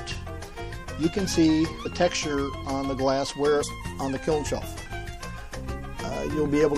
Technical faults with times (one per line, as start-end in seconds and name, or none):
0.00-6.77 MP3 compression
1.84 compressed frames skipped
3.62 compressed frames skipped